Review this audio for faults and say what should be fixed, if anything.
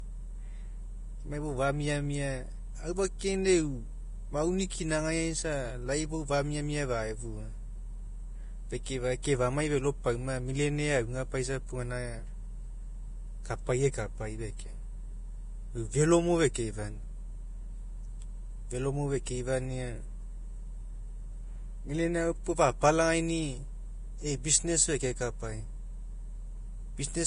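Vorbis compression, throughout: nothing remains above 10.5 kHz, and the treble that survives is hissy and grainy, with roughened tones and softened consonant attacks. This is likely heavy lossy coding that discards high frequencies and replaces fine detail with coarse noise, which fits a bitrate near 30 kbps.

Pre-echo at 9.22 s and 16.54 s: a short hiss runs ahead of a sharp onset by about 17 ms and 15 ms respectively. The coding noise spread across each transform block leaks into the quiet instant before the attack, smearing it.

To prevent both, encode from the original source at a substantially higher bitrate or quality setting, or keep the speech in a lossless format.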